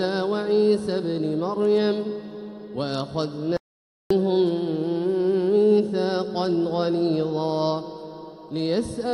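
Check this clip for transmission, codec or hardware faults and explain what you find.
An audio dropout to silence runs from 3.57 to 4.11 s. The input was likely lost briefly, through a disconnected device or broken link, while recording continued writing silence. The sound cuts off abruptly, leaving about 0.54 s of dead silence without room tone, then resumes mid-flow.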